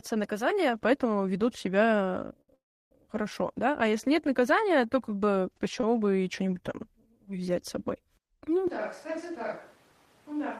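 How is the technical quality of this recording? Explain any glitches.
The speech recording has three kinds of network and capture fault, clustered around 2.4 to 2.9 s, at 5.8 s and in the final two seconds.

Short stalls from a late packet occur at 2.41 to 2.51 s, after "наказания поэтому ведут себя", and at 5.81 to 5.86 s, after "наказания то как бы" and before "бы и". A packet arrived late and the jitter buffer emptied. The receiver held the last sound for about 69 ms and 24 ms, then resumed with nothing lost.

A call audio freeze follows at 2.54 to 2.94 s. Held-up packets are the likely cause. The last sound decays into about 320 ms of silence. In all, 367 ms of filler is inserted before the speech resumes where it stopped.

From 8.68 s to the end, the sound switches to a distant microphone. The close microphone's signal has likely dropped out. The voice turns suddenly roomy and hollow, with less bass. 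It is roughly 10 dB quieter, with room noise about 25 dB below the speech.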